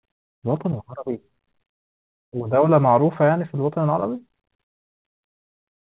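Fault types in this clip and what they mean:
Repeated stalls (stutter): between 3.8 and 4.46 s the playout buffer ran dry four times, about 57 ms in total and the longest gap 30 ms, each filled by stretching the preceding sound. The speech drags, and the waveform shows short repeated stretches of the same cycles.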